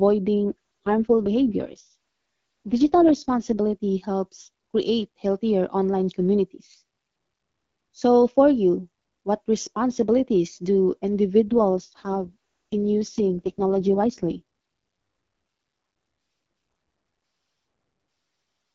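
AMR rate drop at 0.44 to 3.60 s, just before "helps create healthier online", and at 11.48 to 14.42 s, after "you what responsibilities do". A weak link forces a lower coding rate, so the speech turns raspy and synthetic without any gap or band loss. This fits a step down from 12.65 to 6.6 kbit/s.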